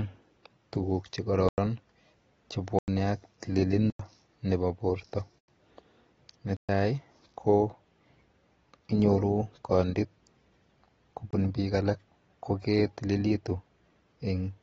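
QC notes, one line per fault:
Throughout, AAC compression: plainly audible codec damage leaves the speech dull and smeared, with nothing above 8.9 kHz. A spectrogram shows a hard ceiling there. The likely cause is low-bitrate AAC-LC encoding, which fits about 28 kbps.
1.49 to 11.33 s, block of digital silence: six abrupt dropouts with no fade. They start at 1.49, 2.79, 3.90 (just before "nepo porto"), 5.39 (just after "nepo porto"), 6.57 and 11.31 s (just before "biik alak koketililitu"). The first four last 93 ms each, which fits an unfilled 4096-sample buffer. The fifth lasts 122 ms and the last 25 ms. Each shows as a flat-line gap in the waveform and a blank vertical stripe on the spectrogram.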